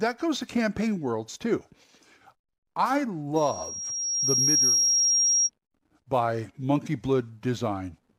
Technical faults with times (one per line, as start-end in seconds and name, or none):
3.36-5.50 loudspeaker feedback squeal